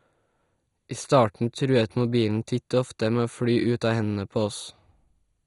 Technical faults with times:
0.00-5.46 MP2 compression

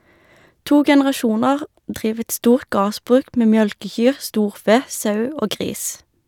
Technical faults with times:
none

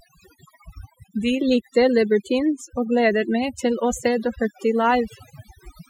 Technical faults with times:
0.00-5.89 overdone noise removal

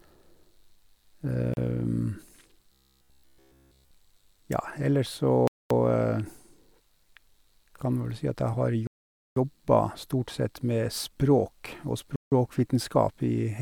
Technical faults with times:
1.54-1.57 Bluetooth stall
2.72-3.94 robotic sound from repeated short buffers
5.47-5.70 Bluetooth stall
8.87-9.36 Bluetooth stall
12.16-12.32 Bluetooth stall

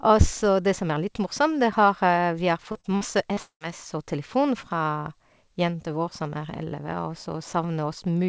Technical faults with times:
2.72-3.63 repeated packet loss (robotic sound)

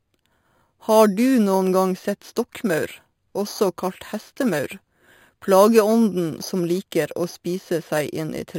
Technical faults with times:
0.00-8.59 imaging from sample-and-hold upsampling

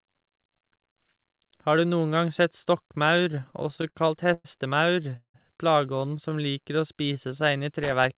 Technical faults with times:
3.18-4.46 repeated stalls (stutter)
5.16-5.36 call audio freeze
6.17-7.58 jitter buffer slow-down
7.83-8.05 loose connector crackle

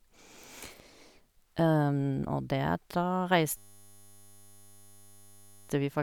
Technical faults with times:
3.57-5.69 system hang loop

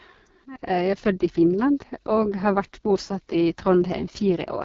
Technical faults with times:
0.00-4.64 AMR wideband (HD Voice) codec

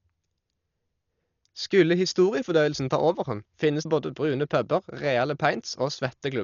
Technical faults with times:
0.00-6.43 Dolby Digital compression

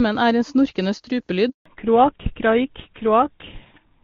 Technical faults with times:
1.49-1.65 handover gap
1.65-4.04 fallback to narrowband

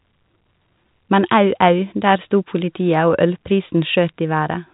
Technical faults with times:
none

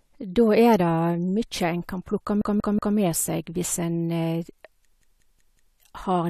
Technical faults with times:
2.41-2.97 repeated buffer
5.02-5.76 repeated buffer

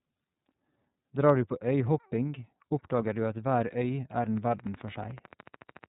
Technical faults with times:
0.00-5.88 iLBC codec
4.37-5.85 train of clicks

